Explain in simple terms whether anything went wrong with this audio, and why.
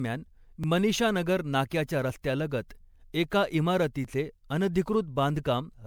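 The speech sounds swirly, smeared and a bit hollow throughout, with blurred starts to sounds. This is generation loss, likely from the recording being squeezed into MP3 and unpacked again about four times, each round adding its own damage on top of the last.

There are tiny skips forward at 0.64 s (just before "मनीषानगर नाक्याच्या"), at 2.10 s (right after it), and at 4.05 s. These are dropped buffers (overrun): the computer likely fell behind, so a few milliseconds of sound were lost and the ends joined together.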